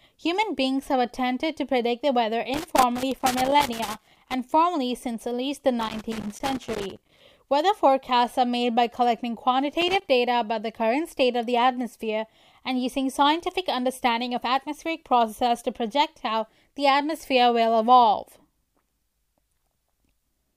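Speech with loose connector crackle at 2.54–4.34 s, 5.80–7.21 s and 9.81–10.09 s. A worn contact keeps breaking the signal. Irregular scratchy bursts result.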